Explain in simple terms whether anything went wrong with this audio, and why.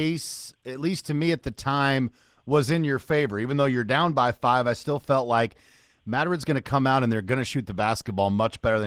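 The speech was squeezed through Opus voice compression for the entire clip, with one coder modelling the voice's lower range and a second layer covering the highest sounds, both given too little data. The damage is plainly audible: a hoarse, grainy, slightly robotic voice throughout.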